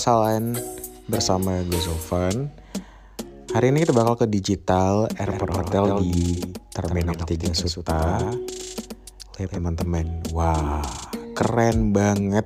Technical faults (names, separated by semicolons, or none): doubled audio track